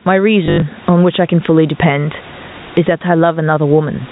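Throughout, gain pumping, likely from input gain set far too high with a fast limiter: the gain swings around 20 dB under each loud syllable, so loud and soft parts sit closer in level and the sound is squashed, visible as a breathing noise floor on the waveform.

From 0.46 to 0.62 s, packet loss with the last packet repeated: 120 ms is missing across those 160 ms, the longest run 80 ms, which fits 20 ms packets. This gives a robotic stutter buzzing near 50 Hz. The spectrogram shows identical repeated slices.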